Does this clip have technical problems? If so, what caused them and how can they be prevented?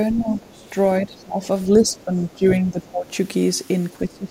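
Yes. Speech suppressed in double talk: the echo canceller likely could not tell the near talker from loudspeaker echo while both sides spoke, so it turned everything down. The voice dips and thins from 0.12 to 0.67 s (deepest, about 25 dB), 1.01 to 1.48 s, 1.77 to 3.1 s (shallowest, about 10 dB) and 3.91 s to the end. Using a headset or a canceller with better double-talk detection prevents this.

The other side's voice leaking through: loudspeaker echo likely reached the microphone and the canceller did not fully remove it. A second voice appears faintly under the speech from 0.21 to 0.4 s, roughly 20 dB down, and again very faintly from 0.65 to 0.7 s. Lower loudspeaker volume, more distance between speaker and microphone, or stronger echo suppression would prevent it.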